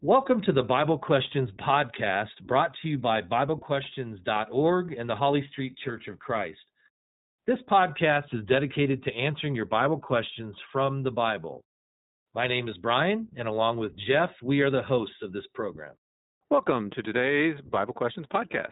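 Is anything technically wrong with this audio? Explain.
Yes. Throughout, the speech carries iLBC codec damage. Each frame's excitation is coded on its own, giving a rough, synthetic grain that fits 20 ms frames, with nothing above 3.8 kHz; a plain low-pass filter would dull the sound without that roughness.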